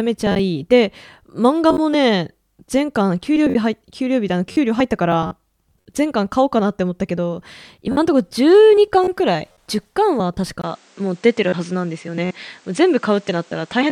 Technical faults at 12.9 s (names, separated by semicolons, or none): input switched to a poorer device